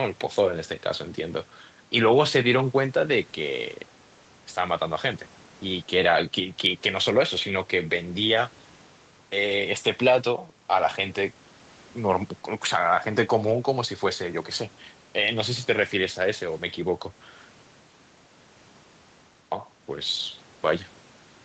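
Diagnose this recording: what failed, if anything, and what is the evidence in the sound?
Nothing in this speech recording has failed at any stage. What can be heard of the call path is normal: the lowest bass is trimmed by the microphone processing's high-pass filter, and the codec leaves nothing above about 8 kHz, which fits a wideband Opus call setting.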